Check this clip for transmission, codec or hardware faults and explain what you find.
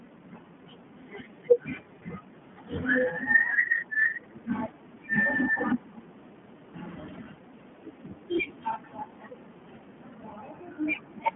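The whole clip carries iLBC codec damage, and it is plainly audible from start to finish. iLBC is a narrowband voice codec. It codes each 20 ms frame's excitation on its own, without drawing on the frame before. Each frame is rebuilt only approximately, so the speech sounds slightly rough and synthetic. The sound fits the 15.2 kbps mode. The line band runs from about 150 Hz to 3.4 kHz, and nothing passes above 3.8 kHz, which leaves the speech thin and dull.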